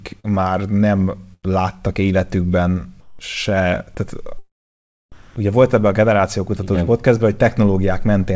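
Short concealed packet loss at 0.20–0.26 s is the first fault in this speech recording: about 40 ms of audio never arrived, and the receiver bridged roughly 38 ms of it by extending the preceding sound before blending back, leaving a brief smear. A burst of packet loss at 1.34–1.45 s, just before "láttak életükben se tehát", removes about 100 ms. The receiver carries the last sound on for around 92 ms and fades it, so a held buzz or fading hiss stands in for the missing stretch before the audio resumes further on. Comfort noise in place of the background appears twice. From 3.01 to 3.19 s, between "láttak életükben" and "se tehát", the real room tone gives way to a steady, featureless hiss about 8 dB quieter. From 5.12 to 5.36 s, just before "ugye volt ebben a", a similar flat noise sits about 10 dB louder than the surrounding background. The likely cause is discontinuous transmission: the sender stopped sending during pauses and the receiver synthesised shaped noise in their place. 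Throughout, nothing is heard above 8 kHz, which fits a G.722 call codec.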